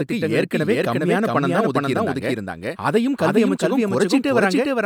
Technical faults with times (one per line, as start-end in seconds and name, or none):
0.00-4.86 doubled audio track